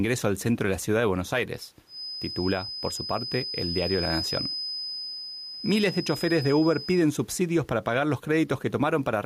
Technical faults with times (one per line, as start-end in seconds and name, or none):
0.00-9.26 gain pumping
1.85-7.09 feedback whistle